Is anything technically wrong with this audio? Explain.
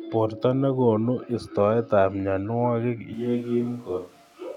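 Yes, there's one problem. At 3.14 s the speech suddenly turns roomy and hollow and loses its low end, and it stays that way to the end of the clip. That's a switch to a distant microphone. The likely cause is that the close mic's feed dropped out and the recording fell back to one further away, which picks up more room reflection than direct sound. The level barely moves, and background noise sits roughly 35 dB under the speech.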